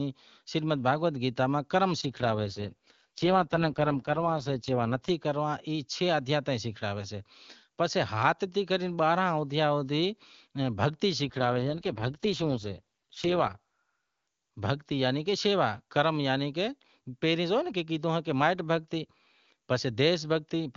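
From 2.01 to 5.10 s and 11.23 to 13.58 s, an AMR rate drop makes the speech raspy and synthetic. Unlike a bandwidth cut or a dropout, the full band holds with no gaps.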